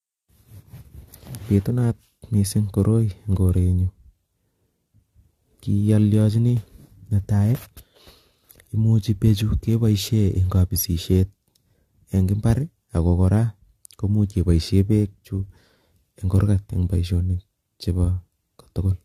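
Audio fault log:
throughout: generation loss. The speech sounds swirly, smeared and hollow, worse than one lossy encode at this quality would leave it. Consonant attacks blur and lose their edge. Nothing is heard above 14.1 kHz. The cause is likely repeated lossy coding, with about three passes through an AAC-LC encoder at a rate that fits 64 kbit/s. Each pass quantises again on a shifted frame grid, so noise and spectral gaps build up.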